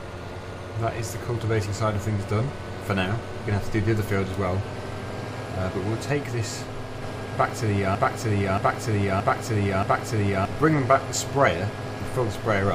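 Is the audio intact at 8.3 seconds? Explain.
No. A broken-record loop runs from 7.95 to 10.45 s, so 8.3 s falls inside it. A fragment of about 0.63 s plays four times in a row, identical each time, with no change between passes. This most likely comes from the player, encoder or stream stalling and re-sending the last fragment it held. Whatever sound belonged to those 2.5 seconds never arrives and is replaced by the repeats.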